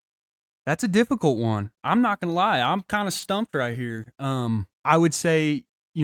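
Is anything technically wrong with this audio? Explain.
Yes. Between 3.19 and 4.07 s the speech shows repeated packet loss, giving it a robotic sound. Over this stretch, five short gaps occur in quick succession, the longest about 30 ms. Most of the lost audio is concealed by extending the preceding sound, about 80 ms in total, roughly 9% of the span, while about 20 ms is simply missing. The repeated patching makes the speech choppy, with small pieces dropped out.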